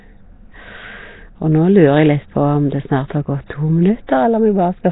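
Speech, with heavy Nellymoser compression throughout: rough, hissy noise fills dropped bands, smearing the sound underwater-like, nothing above 3.8 kHz, likely Flash's Nellymoser Asao codec near 16 kbps.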